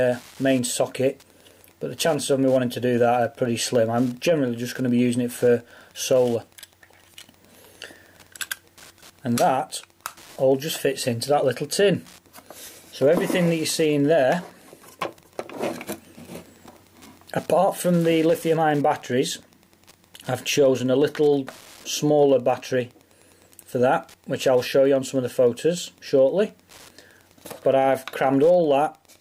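Wi-Fi interference runs through the entire clip: a steady ticking at about ten clicks per second, sitting well below the main sound, roughly 35 dB down. A Wi-Fi radio near the audio circuitry is transmitting its beacon every 102.4 ms, and some stage of the circuit rectifies that radio-frequency burst into an audible pulse. The strict regularity of the ticks is what gives the source away: the beacon interval itself sets the rate.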